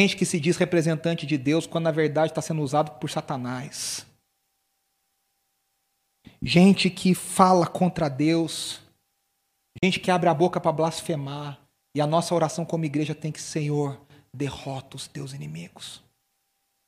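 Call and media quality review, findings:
Probable Bluetooth dropout at 9.78–9.83 s: packets likely missed the headphone link deadline, roughly 40 ms of speech silenced with abrupt or briefly faded edges, resuming further along. Fits about two lost packets.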